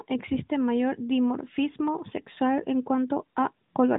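No faults: the speech sits within a narrowband mobile channel that stops at 3.8 kHz, with only the light coding texture that path carries.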